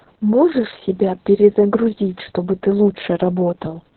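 Speech clip with heavy Opus voice compression throughout: the SILK coder has narrowed the band, so a spectrogram shows a flat ceiling at 4.1 kHz with nothing above, and coarse excitation coding leaves the voice muffled, hoarse and faintly robotic, as fits a very low bitrate near 6 kbps.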